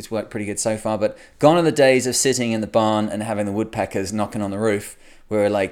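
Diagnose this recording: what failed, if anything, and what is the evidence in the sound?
Nothing failed; no stage in the chain shows trouble.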